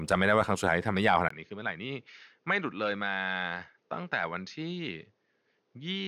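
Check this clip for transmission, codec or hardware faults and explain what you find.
One fault is present. From 1.28 s to the end, after a 20 ms gap, the speech turns duller and slightly quieter, with faint new hiss. This is likely an input switched to a poorer device with narrower pickup. A spectrogram shows nothing above 6.6 kHz after the switch, and the waveform shows the brief dropout and a lower envelope.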